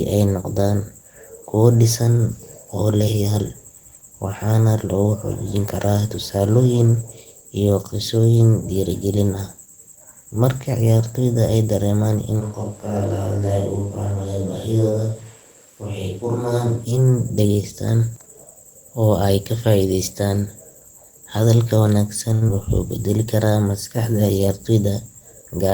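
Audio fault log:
12.42–16.84 s, switch to a distant microphone: the close microphone's feed likely dropped out and a microphone further from the talker took over. The speech turns abruptly roomy and hollow, thinner in the bass, about 5 dB quieter, with room noise rising closer beneath it, then snaps back.
22.33–22.44 s, short stall from a late packet: a packet arrived late and the jitter buffer ran dry, so the receiver held the last sound for 82 ms and then resumed where it left off. Nothing is lost, but the sound just before "wuxuu beddeli karaa" hangs unnaturally long with a faint buzz or dip.
22.48–22.50 s, short concealed packet loss: 40 ms of audio never arrived in time, and the receiver bridged the gap with only a brief 7 ms extrapolation before blending into live audio, which also pulled the delay back down. A tiny smear or wobble lands right before "wuxuu beddeli karaa", with a sliver of sound skipped.
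24.40–24.91 s, jitter buffer speed-up: the buffer was holding more audio than its target, so the receiver trimmed short pitch-period slices repeatedly, removing about 50 ms in total. Speech runs at 108% speed with unchanged pitch, sounding briefly hurried.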